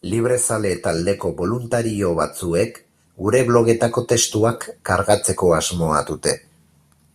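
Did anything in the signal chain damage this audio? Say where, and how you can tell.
Yes. The automatic gain rising happens in the call-processing stage. From 1.7 to 4.63 s, the speech and the background noise swell together by about 4 dB. The AGC judged the input too quiet and slowly raised its gain.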